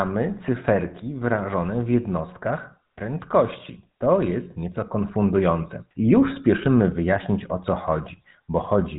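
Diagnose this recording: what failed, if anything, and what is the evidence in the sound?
The codec stage is the culprit here: it's GSM full-rate coding, and the damage is plain from start to finish. The whole speech clip has a buzzy, gravelly roughness and goes dead above 3.8 kHz. That fits a roughly 13 kbps stream whose pulse-driven vocal-tract model throws away most of the excitation detail.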